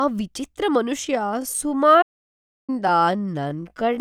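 From 1.01 s to the end, the speech abruptly slows to about 0.65 times its original pace while its pitch stays put, so the speech drags. This is a time-stretched section, likely produced by software lengthening the audio to fill a set duration and preserving pitch by repeating short fragments rather than resampling.

At 2.01 s, inside that slowed stretch, the sound cuts out mid-flow and stays silent for about 0.66 s before resuming at 2.70 s. This is a playback stall. The gap fits the player likely running out of buffered data, or having its audio thread blocked, so the output fell silent until the player caught up and continued.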